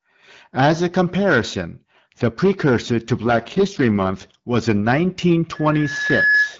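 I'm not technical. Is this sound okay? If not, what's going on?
No. Two things go wrong in this speech recording.

First, an AMR rate drop from 3.20 to 4.48 s. The phone network, struggling with a weak radio link, tells the call's voice codec to squeeze the speech into far fewer bits and spend the rest protecting the signal from errors. Just after "comparison the precursor to", the voice turns rougher, buzzier and more artificial. There's no silence and it doesn't get muffled. Clearer sound returns around "was in".

Second, a loudspeaker feedback squeal from 5.55 to 6.56 s. A microphone picks up the loudspeaker it is feeding, and at one pitch the sound goes round that loop louder each time. It's a single whistling tone at about 1.7 kHz, a high, piercing pitch. Over a little under a second it swells into a squeal that rides above the voice until the clip ends.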